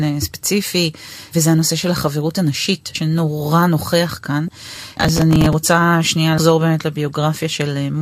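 A speech clip with two kinds of fault. Compressed frames are skipped at 2.95 s, 4.48 s and 6.38 s. At each point the speech jumps forward, losing around 50 ms, 30 ms and 100 ms. Those gaps point to a few whole coded frames missing or rejected as damaged. From 4.67 to 5.53 s there is processor overload crackle. A gritty tearing rides on the speech. The processor missed about twenty deadlines over that stretch, and each miss repeated a scrap of old audio with hard edges. The spacing fits buffers of roughly 5 ms. The crackle stops once the load eases.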